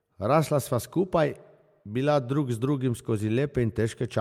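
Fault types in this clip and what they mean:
No technical faults can be heard in this speech recording.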